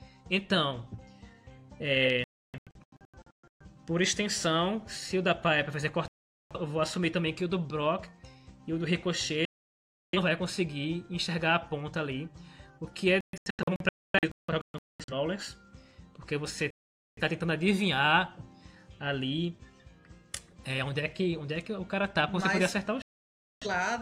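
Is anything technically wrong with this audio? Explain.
Yes. Digital broadcast dropouts mute the audio at 2.24–3.65 s, 6.08–6.56 s, 9.45–10.19 s, 13.21–15.14 s, 16.70–17.22 s and 23.02–23.67 s. The first and fourth are broken into several short holes rather than one gap. In each, the receiver lost usable frames and went silent until clean data resumed, so whatever was sent during those gaps is missing.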